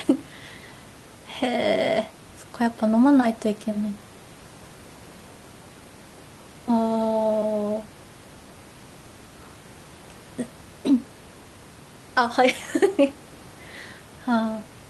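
No technical faults can be heard in this speech clip. There is some room noise in the background, about 21 dB below the speech, which comes from the space where the microphone is.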